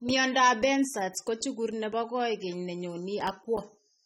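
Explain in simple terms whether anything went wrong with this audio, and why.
Yes, something went wrong. From the first moment to the last, the speech sounds dull and smeared, with a watery warble on held sounds and a fizzy edge on hissing consonants, and nothing is heard above about 16.5 kHz. This points to AAC compression, likely set too low. To save space, the encoder throws away detail it thinks you won't miss and trims the highest frequencies, and at this setting the losses are plainly audible.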